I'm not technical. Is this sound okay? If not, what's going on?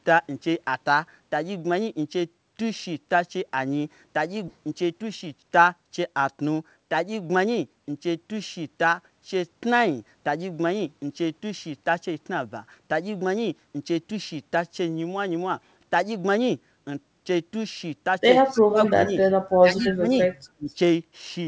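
No. At 4.48 s a skip ahead happens: the call system threw away almost half a second of delayed speech to catch up, so the talk jumps forward with that part missing.

Right after, from 4.57 s to 5.63 s, a jitter buffer speed-up trims tiny slices of speech to cut the remaining delay, so the talker sounds about 7% faster and slightly rushed.

Near the end there is echo leak: the other person's speaker-phone likely failed to fully cancel its own loudspeaker, so a faint copy of the voice returns about a quarter second late at 18.52, 18.86, 19.21, 19.78 to 19.94 and 20.69 s.

At the same time, speech is suppressed in double talk: while both sides talk at once, the echo canceller likely turns everything down, making the voice dip or drop out from 18.52 to 19.16 s, 19.61 to 20.09 s and 20.57 to 20.70 s.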